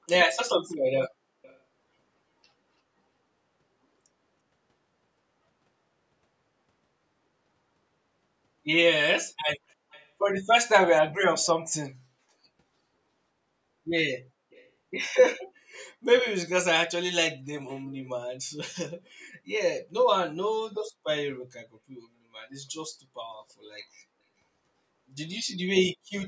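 Speech with an echo leak: faint delayed copies of the voice, roughly 20 to 40 dB down and about 340 to 350 ms late, appear at 0.3–0.38, 0.72–0.76, 1.43–1.58, 9.69–9.74, 9.91–10.09, 11.43–11.48, 14.51–14.69 and 17.68–17.85 s, likely residual loudspeaker pickup that a far-end echo canceller failed to remove.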